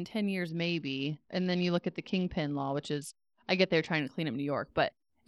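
Speech runs through a Bluetooth SBC bit pool drop from 0.49 s to 4.0 s, ending just before "to clean". The congested link forced the encoder to starve its upper sub-bands and quantise the rest coarsely, so the treble goes dull and a gritty grain sits on the sound. The depth of the loss points to a bit pool falling from about 31 to 9, roughly 72 kbps. Unlike a plain low-pass filter, the dulling arrives with granular noise, and the audio never drops out as it would with packet loss.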